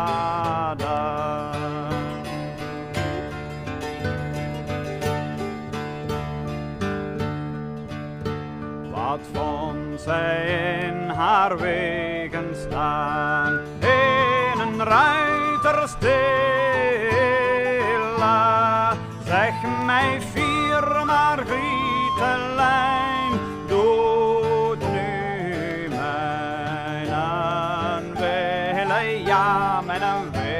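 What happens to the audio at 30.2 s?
Nothing goes wrong at 30.2 s; the audio plays through that moment intact, with no audible fault.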